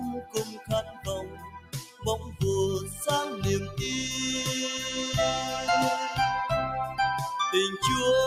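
A noise suppressor designed for speech is applied to this music or sound throughout. It treats sustained, steady content as noise and keeps turning it down while letting attacks pass, so the level swings by around 10 dB and the sound pumps and thins.

Sound cut by the noise suppressor is heaviest from 0.0 to 2.42 s, where held material sinks by as much as 17 dB over most of that span. Shorter dips follow at 2.8 to 3.01 s, about 8 dB, and 3.62 to 3.78 s, about 9 dB, clipping decays short.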